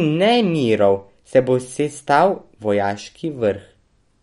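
Throughout the speech, the damage is likely MP3 compression at a starved bitrate, consistent with roughly 53 kbps. The encoder discards everything above 11.2 kHz, dulling the s sounds, and weaker frequency lines flicker between frames, leaving a plainly audible watery swirl and smeared consonant onsets.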